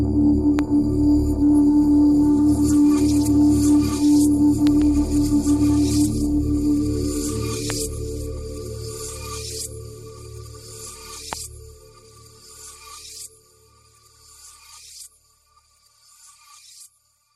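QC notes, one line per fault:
0.59–0.61 s, 4.67–4.84 s, 7.70–7.72 s, 11.33–11.35 s: loud pop. Sharp pops jump out above the sound, which carries on beneath. The first peaks about 10 dB over it, the rest about 15 dB. The 4.67 s event is a double pop. Likely cause: voltage spikes from a switch, plug or static.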